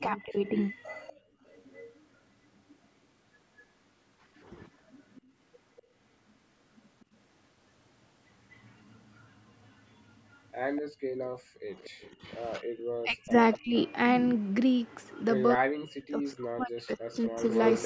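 From 0.0 to 0.45 s the speech dips by roughly 20 dB. This is speech suppressed in double talk. Both ends were likely talking together, and the echo canceller turned this talker down along with the echo it was fighting.

From 0.46 to 1.99 s a faint delayed copy of the speech trails about 242 ms behind, roughly 25 dB down. This is echo leak. The far end's canceller likely let some loudspeaker sound through its microphone. It returns from 3.59 to 15.21 s, weaker, around 30 dB down.

From 10.91 to 12.04 s the room sound drops by about 40 dB, for roughly 0.7 s in total. This is background gated by the echo canceller, which clamped the microphone while the loudspeaker played.

From 12.6 to 13.75 s, and again from 15.54 to 17.43 s, the speech is suppressed in double talk once more. It falls by about 40 dB for roughly a second, then about one and a half seconds. The 242 ms echo leak reappears at 17.22 s and runs to the end, only about 5 dB below the speech.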